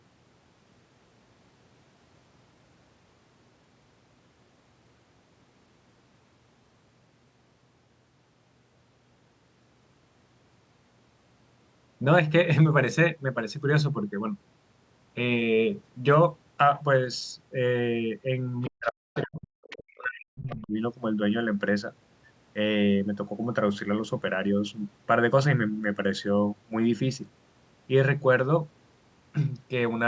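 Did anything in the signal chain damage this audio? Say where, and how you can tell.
Yes, both problems sit in the call-processing stage, around the echo canceller, all between 18.6 and 20.7 s.

The other side's voice leaking through shows up as short scraps of a second voice at 18.62–18.70, 18.86–18.91, 19.14–19.23, 19.70–19.96 and 20.38–20.67 s. It starts roughly 30 dB under the talker and climbs to only about 10 dB under by the last burst. That's most likely far-end audio from the loudspeaker getting back into the mic, with the canceller not subtracting it fully.

Over the same stretch, 18.68 to 20.73 s, the talker's own speech gets pushed down, dipping by as much as about 40 dB across roughly two seconds. That's likely speech suppressed in double talk. The canceller hears both sides at once, can't tell the near talker from the echo, and clamps the lot. The mic chain's band limit, with nothing above 8 kHz, is normal here.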